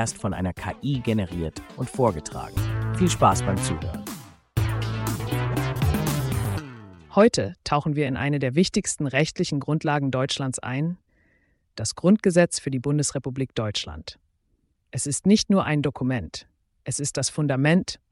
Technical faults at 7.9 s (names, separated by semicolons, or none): none